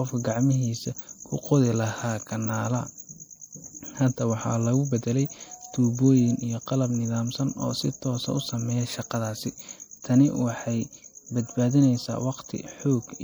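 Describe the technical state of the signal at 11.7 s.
At 11.7 s the speech carries plainly audible MP3 compression damage, as it does for the whole clip. The sound has a watery, swirling quality. The likely cause is a low-bitrate encode, consistent with about 64 kbps. At that rate the encoder drops quiet spectral detail that flickers in and out between frames. That flicker produces the swirl.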